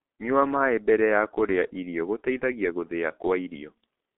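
Muffled, hoarse speech runs the whole clip, its consonants smeared and nothing above about 3.7 kHz, inside a narrow telephone band of roughly 250 Hz to 3.5 kHz. That is heavy G.723.1 codec damage. The coder models the voice in 30 ms frames and updates that model slowly, so fast consonant detail blurs and the tone turns rough. The degradation fits a very low rate near 6 kbit/s.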